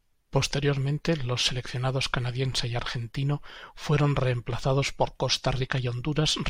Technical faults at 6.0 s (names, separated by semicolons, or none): none